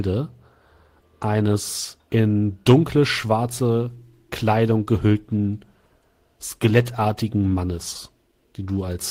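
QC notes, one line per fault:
No faults found in the speech clip. There is nothing to log against any timestamp.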